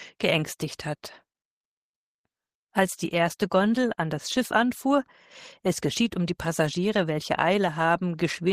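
No technical faults are audible.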